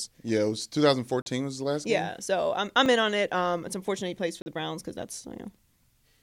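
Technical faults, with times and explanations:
1.22–1.26 s, 2.86 s, 4.42–4.46 s: block of digital silence. The sound cuts out and back with no fade, leaving 40 ms holes after "it was" and "unfortunate he plays for", and a brief tick after "so I'm I'm".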